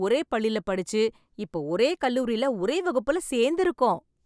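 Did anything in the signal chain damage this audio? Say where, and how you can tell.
No, nothing audible in this speech recording points to damage at any stage of the signal chain.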